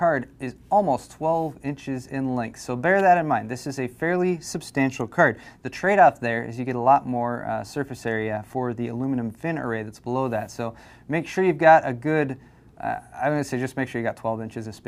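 A nearby switch, motor or static discharge likely arced briefly, and the audio line picked up that burst of electrical energy, producing an electrical switching spike at 2.99 s. It lasts about 10 milliseconds and is heard as a sharp snap laid over the sound, not blended into it. It peaks somewhere around -25 dBFS.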